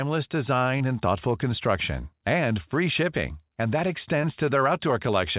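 Speech packets arrived too late for the decoder at 0.78–0.82 s and 4.22–4.25 s, a short concealed packet loss each time; the gaps were patched from preceding sound, leaving brief smears in this narrowband, 4 kHz-limited speech.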